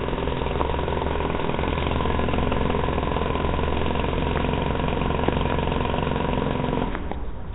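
Throughout, the audio sounds rough and hissy, with a smeared, underwater quality and nothing above 3.9 kHz. This is likely heavy Nellymoser compression, which fits about 16 kbps.

Loud pops land at 0.61–0.63 s, 4.37–4.39 s, 5.29–5.54 s (two) and 6.95–7.14 s (two). They peak roughly 15 dB above the sound. Each is likely a sudden voltage pulse added to the signal.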